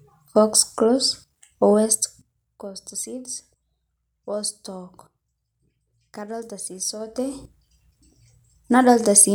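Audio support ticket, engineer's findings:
Zipper noise, 1.68–2.61 s, after "box close", ending before "cost seed": ticking over a fade of about 15 dB down. Gain stage stepping in about 2 dB increments, roughly ten steps a second, unsmoothed; each jump clicks.

Zipper noise, 6.97–7.47 s, after "kadolita sii": faster zipping during a rise of about 15 dB. Same stepped gain, about 2 dB per step, roughly fifteen steps a second, no ramp interpolation between steps.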